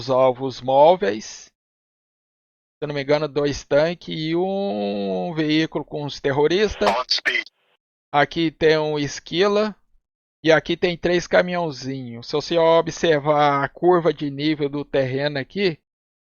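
Nothing stood out as a technical problem on listening.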